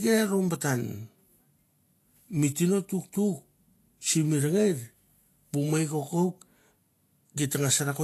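A speech clip marked throughout by Vorbis compression damage, likely from a low-bitrate encode; the coarseness points to something in the region of 35 kbps. The treble is plainly hissy and grainy, consonant attacks are smeared, and voiced tones sound roughened, because fine high-frequency detail has been replaced by noise of similar energy. On a spectrogram, energy stops abruptly at 14.2 kHz, and the upper bands show blotchy, speckled patches instead of clean harmonic structure.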